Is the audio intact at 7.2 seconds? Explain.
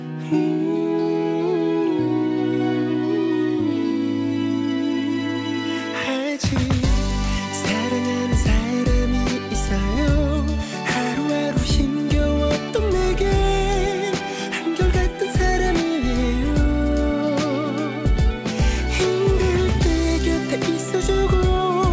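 Yes, the audio at 7.2 seconds is intact, with no dropout, glitch or distortion there beyond the ordinary sound of a wideband call codec that carries nothing above about 8 kHz.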